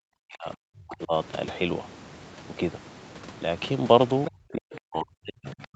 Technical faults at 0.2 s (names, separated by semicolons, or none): speech suppressed in double talk